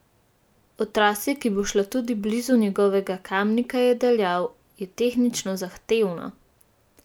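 No technical faults are audible anywhere in the recording.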